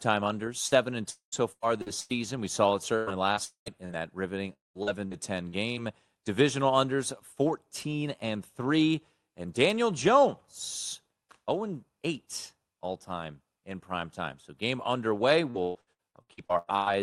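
Speech heard through an Opus call path with a 12 kHz audio band, cut up twice by repeated packet loss with its robotic sound. From 0.67 to 5.79 s there are 11 short holes, the longest about 107 ms. Around 620 ms goes missing, and about 12% of the stretch is patched by stretching the last sound. After "game underway", from 15.51 to 16.88 s, 10 holes up to about 121 ms long mean 46% of that span is patched. What marks this as repeated loss rather than one outage is the rapid alternation of real audio and brief continuations. Inside the first stretch, three longer holes at 1.10–1.35, 3.45–3.69 and 4.53–4.78 s sound different. Each starts with a buzzy continuation that fades, then goes fully quiet for 0.11, 0.11 and 0.17 s. Audio returns with about 0.22 s simply gone, a pattern that points to a likely long network dropout.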